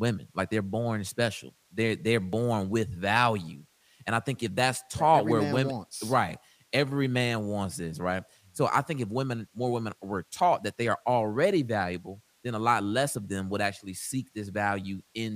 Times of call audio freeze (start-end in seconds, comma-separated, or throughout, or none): none